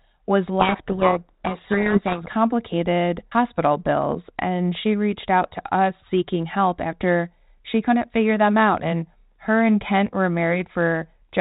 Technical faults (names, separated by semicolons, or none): codec payload misread